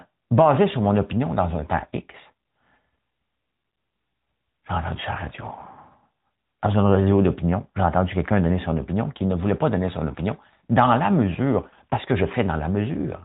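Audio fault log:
Throughout: AMR narrowband mobile codec. Everything above 4 kHz is gone, and the speech has that buzzy, synthetic edge, which fits a mid-rate mode around 10.2 kbps.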